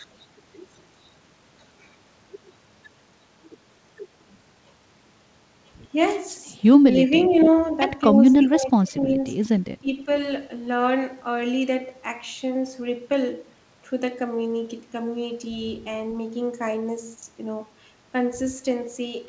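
From 7.29 to 7.5 s a faint, delayed copy of the speech trails the talker, sitting roughly 15 dB below it and arriving about 284 ms late. This is an echo leak: the far end is likely playing the call through a loudspeaker, and its echo canceller let part of what its microphone picked up slip back down the line.

Overlapping that scrap, from 7.33 to 7.48 s, the talker's level dips briefly by about 5 dB. A similar shallow dip follows at 8.12 to 8.17 s. From 8.42 to 9.27 s the speech sinks much further, by up to about 25 dB, in pieces totalling most of a second. From 9.8 to 10.09 s it drops again by about 15 dB. This is speech suppressed in double talk. With both ends active at once, the echo canceller likely could not tell the near talker from the returning echo and turned both down. Throughout, the band stops at 8 kHz, which fits a G.722 call path.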